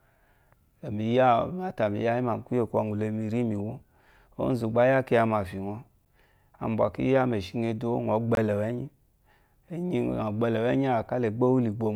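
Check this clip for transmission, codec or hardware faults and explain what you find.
Two dropouts to digital silence interrupt the speech. A block of digital silence hits at 6.05 s, lasting about 9 ms, and another runs from 8.35 to 8.37 s, about 21 ms. The sound cuts straight out and returns with no fade, most likely because the output buffer wasn't filled in time, and the longer gap spans 1024 samples. The first is a sharp tick, the second a brief hole.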